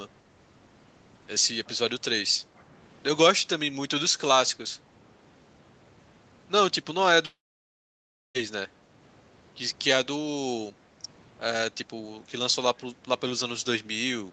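At 7.25 s the speech cuts out and the last sound smears into a short buzz that fades to silence for about a second. It picks up again at 8.37 s with roughly 1.1 s missing, likely a long network dropout.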